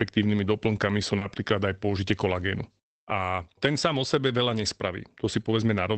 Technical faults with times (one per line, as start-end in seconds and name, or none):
1.17-1.23 short concealed packet loss
1.21-1.23 lost packet rebuilt from error correction
3.93-3.99 lost packet rebuilt from error correction